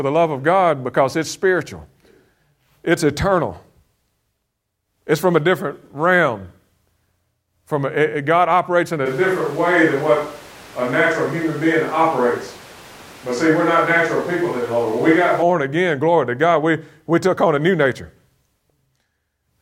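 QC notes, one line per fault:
9.07–15.41 s, switch to a distant microphone: right after "operates in a" the speech turns abruptly roomy and hollow, with thinner low end, then snaps back close at "again glory to". The close microphone's signal likely dropped out, leaving a farther pickup. Loudness barely changes, but room noise rises to roughly 25 dB below the speech. The spectrogram shows reduced bass, smeared reverberant tails and a raised noise floor between words, with hard boundaries at both ends.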